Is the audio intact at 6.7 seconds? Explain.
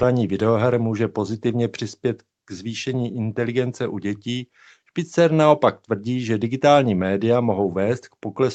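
Yes, at 6.7 seconds the speech is intact, with no dropout, click or distortion at that moment.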